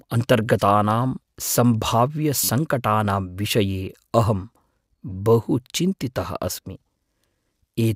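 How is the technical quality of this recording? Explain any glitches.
The recording has one audible glitch, a brief stutter just under two and a half seconds in.

Repeated buffer, 2.44 to 2.49 s: new audio failed to reach the playback device in time, so it replayed the most recent chunk instead of stalling. That chunk is about 10.7 ms long, which fits a 512-sample buffer, and it sounds several times in a row. Each hard join between copies makes the span a short buzzy click rather than a clear stutter. Essentially none of the underlying audio is lost. The sound simply resumes where it left off.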